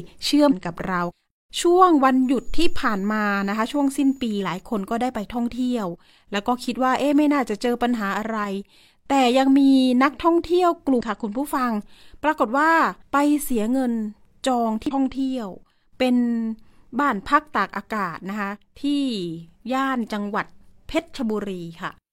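At 0.47 to 0.53 s, damaged data in the compressed stream makes the decoder lose sync and hunt for the next frame header, producing a short glitch. From 2.24 to 4.62 s, a switching supply whistle appears: a power supply adds a faint high tone, well below the speech, near 7 kHz, within 6.79 to 6.99 kHz. The same stream damage returns as similar blips at 4.37 to 4.42 s, inside the whistle, then at 10.96 to 11.01 s and 14.86 to 14.91 s.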